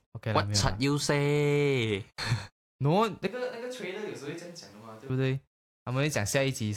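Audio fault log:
3.27–5.10 s, switch to a distant microphone: the speech abruptly turns roomy and hollow, drops by roughly 10 dB and thins in the bass, then snaps back just as suddenly at 5.10 s. The likely cause is the close microphone dropping out so a farther one carries the signal. On a waveform the envelope steps down sharply at the start and back up at the end, while a spectrogram shows weaker low frequencies, smeared reverberant tails and a raised noise floor roughly 30 dB under the speech.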